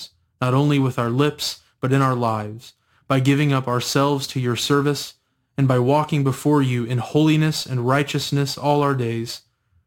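From start to finish, the speech carries crude rate conversion. Samples were repeated to stretch the stream, with no smoothing filter. The pattern fits a jump from 44.1 kHz to 48 kHz. That adds samples in a ratio of about 1.09. Each repeated sample leaves a small jagged step. The steps recur on a fixed cycle, unrelated to the speech. They form a gritty, inharmonic fizz about 30 dB below the voice. It rises on loud and sibilant sounds.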